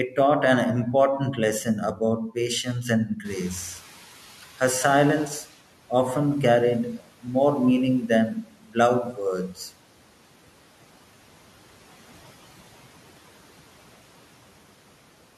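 From 3.07 to 3.27 s the noise suppressor mistook part of the speech for noise and turned it down by up to about 8 dB, so roughly 150 ms of sound comes out faint and swallowed. Just as the room noise jumps by about 17 dB near 3 s, the noise suppressor is catching up. Its noise estimate lags the rise, so from 3.24 to 5.58 s the background noise passes through only partly reduced, then sinks by about 11 dB over 2.34 s, settling before "often carried more meaning". Right after those words, from 8.35 to 8.76 s, speech is again cut by the noise suppressor. It drops by up to about 13 dB across roughly 150 ms, so that stretch sounds faint and swallowed, turned down with the background.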